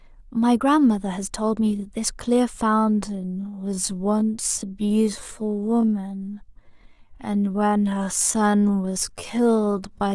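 At 2.65 s the speech changes pace abruptly and stays that way to the end of the clip: a time-stretched section running at about 0.56 times the original speed while the pitch stays unchanged. The likely cause is software lengthening the audio to fill a set duration, repeating short slices of the waveform to preserve pitch. Stretched this far, the speech sounds drawn-out and dragging.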